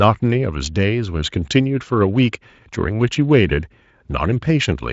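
No technical faults can be heard in this speech.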